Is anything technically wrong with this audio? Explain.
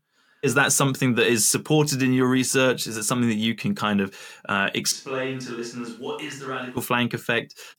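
Yes. From 4.92 s to 6.77 s the speech suddenly turns roomy and hollow, with thinner bass. The level falls by about 10 dB, and background room noise comes up to roughly 35 dB below the speech. This is a switch to a distant microphone. The close microphone's signal was likely lost, so a mic further away carried the speech. It picks up more room reflection and noise. At 6.77 s the close sound returns just as abruptly.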